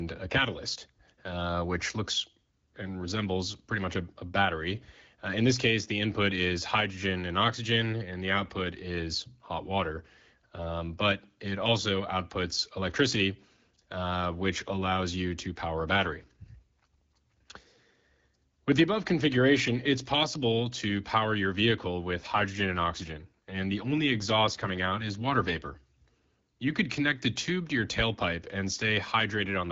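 Twice the speech turns rougher and more synthetic without losing any bandwidth or breaking up: from 15.92 to 18.68 s, and again from 22.19 to 25.80 s. Each is an AMR rate drop. The network pushed the AMR-WB (HD Voice) codec down to a lower mode and spent the freed bits on error protection. The extra coarseness fits a step from 12.65 to 8.85 kbit/s, and clarity returns when the rate climbs back.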